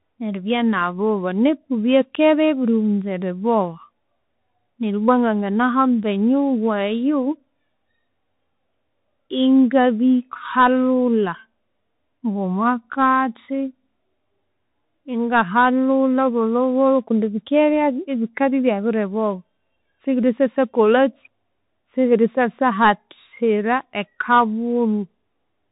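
Bluetooth CVSD headset codec damage runs throughout. The speech is coded one bit at a time as up or down steps, which fits a 64 kbps link, and nothing above 3.8 kHz survives. Sibilants turn scratchy, loud bright sounds distort, and granular hiss sits underneath.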